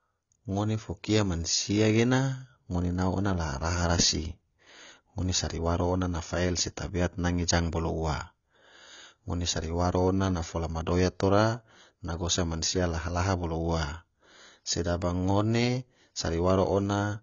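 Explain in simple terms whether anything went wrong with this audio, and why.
The audio was likely squeezed hard by AAC compression, a file-shrinking codec that discards detail it judges unimportant. From start to finish, nothing above 7 kHz survives, so the speech sounds dull and smeared, with a fizzy, warbling edge on hissing sounds.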